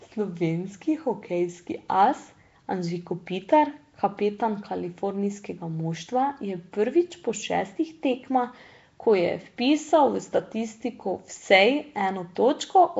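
Speech runs its whole length with a rough, hissy halo, a smeared underwater quality and nothing above 7.7 kHz, plainly audible damage that likely comes from Nellymoser compression. That Flash-era codec gives weak bands no bits and fills them with noise, consistent with a rate near 32 kbps.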